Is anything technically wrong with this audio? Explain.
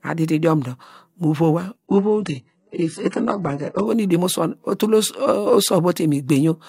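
Yes. From 1.86 to 3.86 s, between "idiom dor mu vowa" and "nu idomosuwon otule", the adaptive stream drops to a lower bitrate. Nothing sounds above 11.1 kHz, the treble turns synthetic and artefacts thicken, which fits a switch to a very low-rate HE-AAC rendition. Quality changes abruptly, without a gap.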